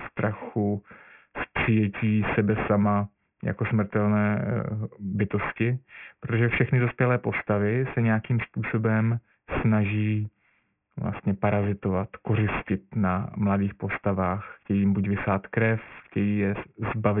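Speech throughout shows aliasing: downsampling from 48 kHz to 6 kHz without filtering folds energy above 3 kHz back, fairly loud, so sibilants sound gritty and the spectrogram runs solid to the 3 kHz edge.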